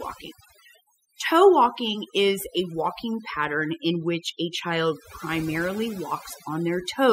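Noise reduction set far too aggressively on this speech recording causes overdone noise removal throughout. Frequency bands near the noise estimate are pulled down or shut off, taking quiet parts of the voice with them, so the background drops and breaks up into twinkling specks.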